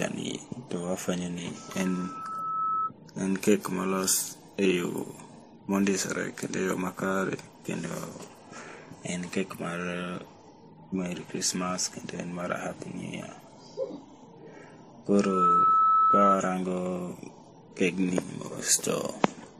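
The speech has likely been transcoded through a chain of lossy codecs, passing through several low-bitrate encoders in turn, with the last pass sounding like MP3. Each encoder spends its limited bits re-encoding the previous one's damage and then adds its own. The result carries layered artefacts throughout: the different codecs' artefacts heard together and a hard ceiling with nothing above 15.2 kHz.

From 1.55 to 2.92 s, a loudspeaker feedback squeal breaks out. A microphone is picking up the loudspeaker it feeds, and the loop's gain exceeds one at 1.3 kHz. That single tone swells over about a second until it sits roughly 5 dB above the speech. The same squeal returns from 15.13 to 16.39 s, again at 1.3 kHz. This time it climbs much faster, in under half a second, and peaks around 10 dB above the speech.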